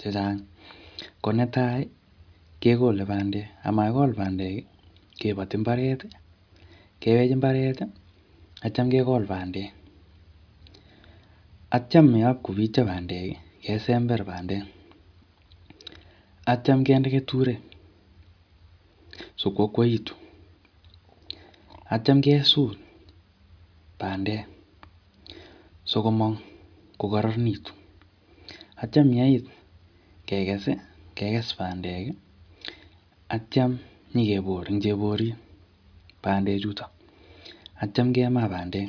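Listening to the speech, nothing stood out as a technical fault at any point.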